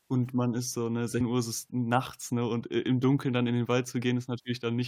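A speech recording in which the sound suddenly jumps forward at about 1.20 s, as though a small piece of the talking had gone missing. This is compressed frames skipped: roughly 150 ms of audio never plays, which points to around seven consecutive 23.2 ms frames lost from the file or rejected as damaged by the decoder.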